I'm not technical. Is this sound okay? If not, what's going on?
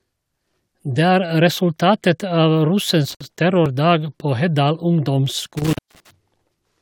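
No. Twice, a loose cable or plug briefly lost contact, an intermittent contact. The first time is just after "resultatet av", between 3.10 and 3.25 s, when the sound drops out for about 60 milliseconds. The second is between 5.57 and 6.11 s, with a gap of about 220 milliseconds. Each dropout has crackle at its edges and faint hiss in between.

At 3.66 s there is an overlap between stream segments. The audio arrives in chunks, apparently about 4 seconds long, and two chunks claimed the same moment. The player cut out the overlap, removing a sliver of real sound and leaving a small click or skip.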